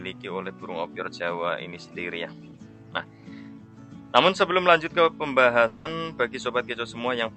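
From 5.67 to 5.87 s the sound gives way to a buzzy, fading continuation of itself, then picks up further on with about 0.18 s simply gone. This is likely a long network dropout, with the receiver's concealment filling the gap, heard through a call path band-limited near 8 kHz.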